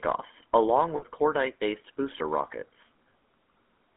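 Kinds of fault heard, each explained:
GSM full-rate codec: The whole clip has passed through the original GSM speech coder, which models the vocal tract and drives it with a coarse, regularly spaced pulse excitation. The result is a plainly audible buzzy, gravelly roughness on the speech, consistent with the 13 kbps full-rate scheme. The audio is confined to a telephone band of roughly 250 Hz to 3.4 kHz, so it sounds thin at the bottom and lacks any top end.
Lost GSM frames: When a coded frame fails, the decoder reuses the parameters of the last good frame, with the level usually falling from the second lost frame on, instead of leaving a gap. This happens twice. From 0.96 to 1.03 s, about 60 ms of audio is replaced by a held, rough, metallic ring. From 2.60 to 2.64 s, a shorter 20 ms substitution produces a brief rough, metallic ring. Neither loss lasts long enough to fade fully to silence.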